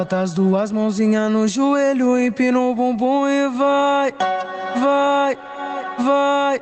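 Gain pumping runs through the whole clip, a level swing of roughly 20 dB. The likely cause is input gain set far too high, with a fast limiter or compressor clamping down on each peak, squashing loud and soft parts together. A noise gate would cut the gaps to near silence, but pumping works differently. This sits over the call path's bandwidth, which stops near 8 kHz.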